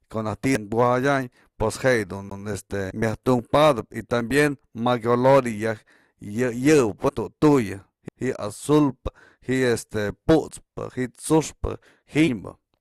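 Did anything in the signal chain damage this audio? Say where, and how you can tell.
Yes, at the playback stage from disc: a CD skip occurs twice, at 2.30 s and 8.08 s. Each is a tick with a very brief mute, on the order of 10 to 20 ms, after which the speech resumes from a different point instead of continuing smoothly. A knock or disc flaw threw the laser onto another track of the spiral, so the player dropped output momentarily and picked up reading elsewhere on the disc.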